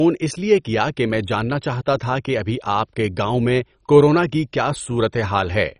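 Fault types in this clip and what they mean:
MP2 compression: Throughout the speech, nothing is present above 10.4 kHz. What remains sounds dull, gurgling and granular, with upper sub-bands dropping in and out, which points to MPEG Layer II coding heavily starved of bits, likely at around 32 kbps.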